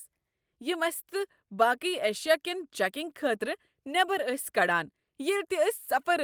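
Short concealed packet loss at 5.03 to 5.09 s: about 40 ms of speech arrived too late, so the receiver extended the preceding sound, leaving a brief smear.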